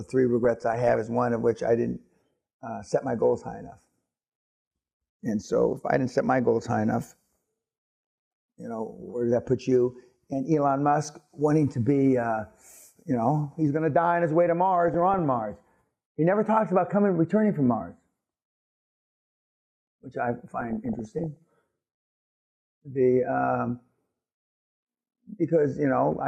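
DAB burbling occurs at 0.45–0.96 s, 7.42–8.31 s, 14.88–15.20 s and 20.58–21.37 s. Bit errors of roughly 0.4 to 0.7 percent slip past error correction, making individual sub-bands jump in level and producing short blips of noise.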